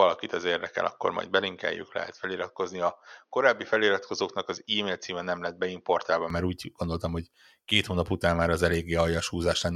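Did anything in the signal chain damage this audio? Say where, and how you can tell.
Yes. There is an input switched to a poorer device from the start until 6.30 s, just before "úgy gondoltam hogy két", where the sound abruptly opens up. Up to that point the speech has nothing above 6.5 kHz and sounds dull and boxy, with a faint noise floor about 50 dB down. The switch has no gap and no real jump in level. This most likely happened at the device and driver stage, where the system had been capturing from a narrower-band microphone or headset profile before returning to the better input.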